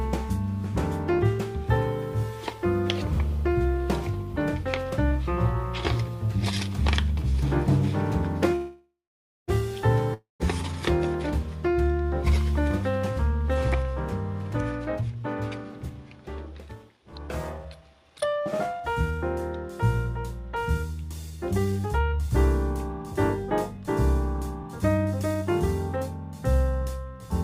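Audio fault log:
8.55–9.50 s, call audio freeze: the last sound is stretched into a fading buzz that settles into about 560 ms of silence, and the whole gap lasts 924 ms. The audio then resumes exactly where it stopped, with nothing skipped, so the timing after this point sits 924 ms later. That points to packets that were likely held up until the jitter buffer ran dry. Unlike a dropout, nothing is lost.
10.14–10.42 s, long network dropout: a similar fading hiss and about 150 ms of silence fill a 258 ms gap. When the audio returns it has jumped ahead by about 260 ms, so that stretch is never heard. This is likely packets that never arrived at all, rather than packets that were only delayed. What separates it from the freeze just before is that the sound resumes further on, not where it left off.
15.01–15.91 s, 16.60–19.19 s, 21.30–22.00 s, 23.04–23.85 s, 24.63–25.97 s, jitter buffer speed-up: the audio runs fast at unchanged pitch. 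It plays at 109%, 112%, 111%, 105% and 107% speed in turn, which sounds hurried. The receiver trimmed repeated pitch-period slices to drain excess buffered audio, about a tenth of a second in most stretches, about 0.05 s in one, and roughly 0.3 s in the longest. It differs from a simple speed change because the pitch stays the same.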